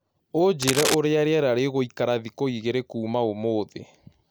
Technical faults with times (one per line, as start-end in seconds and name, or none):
0.62-0.94 cable scratch noise